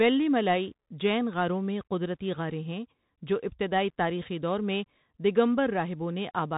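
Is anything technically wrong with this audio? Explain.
Yes. The whole speech clip carries plainly audible Bluetooth CVSD headset codec damage. Nothing passes above 3.8 kHz. Each sample is coded as a single up-or-down bit, which fits a 64 kbps link. S sounds turn scratchy, and a granular hiss lies underneath.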